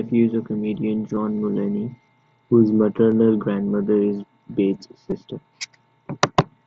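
Speech clip with concealed Bluetooth headset packet loss at 1.15, 3.11 (just before "grandmother is") and 5.10 s: brief gaps, up to 15 ms, filled by repeated waveform rather than silence, so no click or hole.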